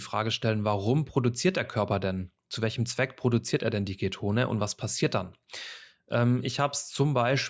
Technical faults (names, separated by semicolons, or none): none